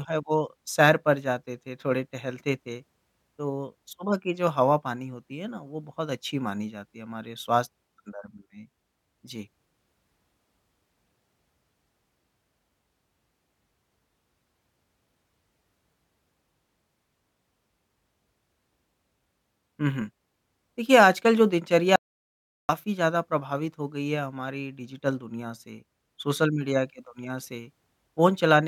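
An audio dropout to silence runs from 21.96 s to 22.69 s, about 0.73 s. The speech cuts off mid-flow into silence with no room tone, likely because the input signal was lost while the recorder kept writing silence.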